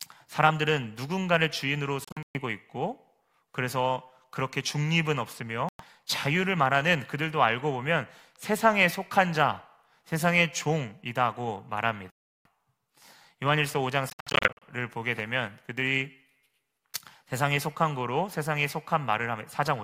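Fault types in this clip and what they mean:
Bluetooth dropout: the speech drops into silence and resumes further along, as if it had kept playing during the gap. Near 2.05 s and 14.1 s the loss comes as clusters of short cuts spread over about 0.3 s and 0.5 s. At 5.69 s and 12.10 s there are single holes of about 0.11 s and 0.35 s. The likely cause is audio packets reaching the headphones too late and being discarded.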